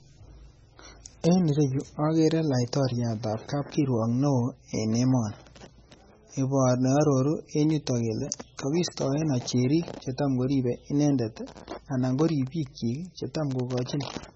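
Heavy MP3 compression runs through the whole speech clip: nothing survives above 8 kHz, and the sibilants turn watery and swirly with metallic chirps as weak frequency lines drop in and out between frames. This likely comes from a very low bitrate, around 18 kbps.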